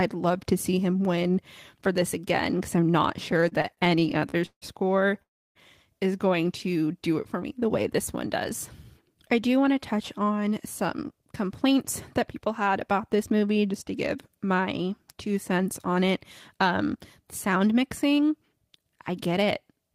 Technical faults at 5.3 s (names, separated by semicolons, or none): call audio freeze